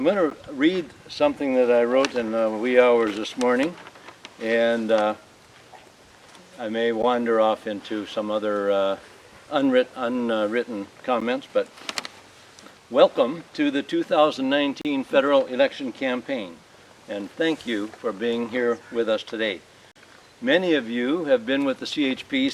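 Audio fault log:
0.30 s, 7.02 s, 11.20 s: block of digital silence. Each is a 12 ms dropout that fits a missed 512-sample buffer. The audio drops straight to silence and back with no fade, so these come across as quick ticks.
14.81–14.85 s and 19.92–19.96 s: block of digital silence. These are longer holes, about 35 ms and 42 ms, so they sound like brief gaps.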